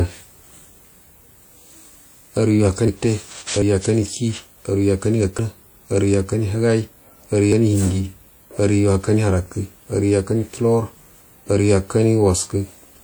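At 2.88, 3.62, 5.39 and 7.52 s the speech jumps forward with no gap, losing roughly a tenth of a second at the first two and about a fifth at the last two. That's likely a dropped buffer (overrun), where unread audio got overwritten.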